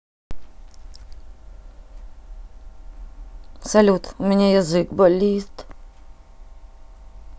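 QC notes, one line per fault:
0.00–0.31 s, cut-off start: dead digital silence, then the speech lands mid-sound at 0.31 s with no natural attack, since capture kicked in late.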